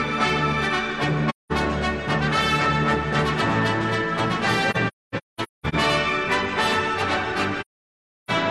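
AAC frame loss with muting: the decoder lost frames and zeroed their spectrum, so the overlapping windows fade the sound into soft-edged holes. They occur at 1.29–1.52 s, scattered from 4.70–5.75 s (longest gap roughly 0.3 s), and at 7.60–8.31 s.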